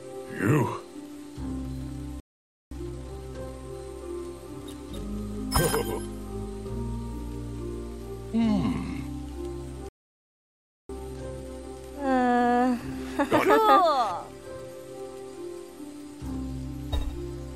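The audio plays back with two playback stalls, each followed by a stretch of time-compressed catch-up. At 2.20 s the sound cuts out mid-flow and stays silent for 0.51 s, then again at 9.89 s for a full second. The player most likely ran short of data or had its output thread held up, so nothing reached the output until it recovered. Each time, the audio picks up again where it stopped.

After each stall the player works through its backlog by trimming small slices and cross-fading the joins. Pitch stays put, but the sound comes out hurried. From 2.71 to 3.73 s it runs at 1.5x. After the longer gap it catches up more gently, at 1.1x from 10.89 to 13.89 s, so that stretch is subtler but still a bit pushed.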